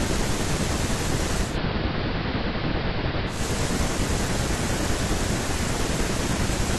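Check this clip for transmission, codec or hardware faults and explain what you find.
One fault is present. From 1.41 s to 3.44 s there is digital radio blending to analogue. The receiver lost the digital stream and cross-faded over 177 ms to the station's AM broadcast, then back. On AM the speech dulls, drops about 1 dB, and gains faint hiss.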